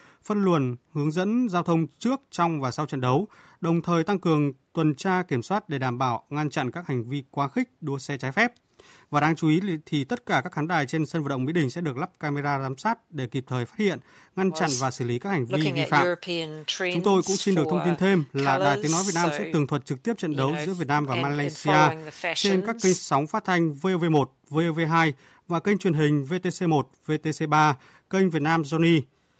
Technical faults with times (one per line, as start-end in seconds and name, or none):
none